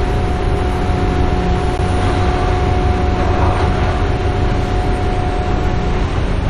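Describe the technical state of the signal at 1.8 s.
A gap between stream segments sits at 1.78 s. The timestamps of two consecutive segments, which fits 2-second segments, leave about 13 ms uncovered, and the player fills that hole with silence. The sound drops out abruptly with hard edges, then resumes without anything missing.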